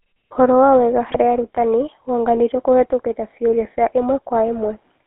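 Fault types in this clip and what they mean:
GSM full-rate codec: This is the original GSM phone codec, which models the vocal tract and drives it with a thinned-out, pulse-like excitation, so the speech picks up that familiar buzzy, gravelly grain. The damage is plainly audible right through. The band sits roughly 250 Hz to 3.4 kHz, with no low warmth and no air up top, which fits the 13 kbps full-rate coder on a narrowband phone line.
GSM bit errors: At about 1.11 to 1.16 s there's a 50 ms burst where corrupted bits reach the decoder, most likely from a weak radio link. When the filter, pitch or gain values get scrambled, the decoder rebuilds a few frames with a warped spectrum and odd level, so you hear a brief squawky, gargling smear. The density of the damage points to an error rate of a couple of percent.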